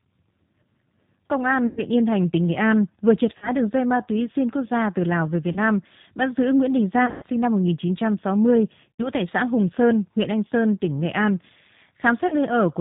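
Speech coded with G.729 at 8 kbit/s, so nothing comes through above 4 kHz and the voice has that slightly rough, synthetic edge. There's also VoIP packet loss concealed by the speech codec at 1.67, 3.38, 5.52, 7.06, 8.91 and 12.28 s. The decoder stretches its last pitch and filter into a buzzy tone or coloured noise that fades, worst around 7.06 s, where a 120 ms run of loss drags on.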